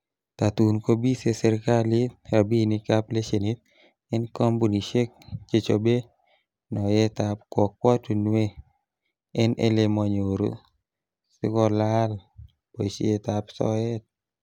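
Nothing in the recording stands out as a technical problem; the speech comes through steady and unbroken from beginning to end, with no moment that calls for a second listen.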